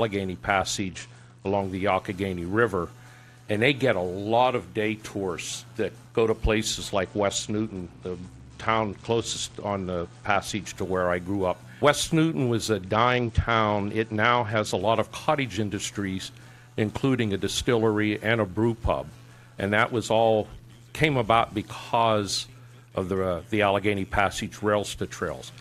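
Three stretches dull and turn gritty, at 0.76 to 1.61 s, 6.93 to 10.67 s, and 12.82 to 14.81 s. That's a Bluetooth SBC bit pool drop: the link starved the encoder, which sounds like a fall from about 28 to 10, near 84 kbps, so the top sub-bands went and the rest coarsened.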